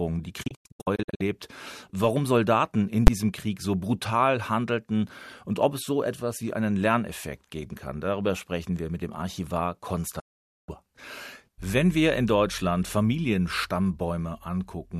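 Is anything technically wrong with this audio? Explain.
Yes. There are two kinds of fault.

A digital broadcast dropout occurs twice. From 0.43 to 1.21 s, the sound breaks into several short holes. The longest is about 96 ms, and about 0.43 s is lost in total. From 10.19 to 10.69 s, about 0.48 s is lost. Each cut fades out in about 8 ms. The receiver muted while frames were missing or corrupt, and the gaps fit frames of about 24 ms. Whatever was sent during those holes is gone.

Invalid numbers at full scale appear at 3.07 s. A calculation produced infinite or invalid values, and these were forced to maximum amplitude for a block of about 10 ms. Because the block is so short, it is heard as a single, very loud bang.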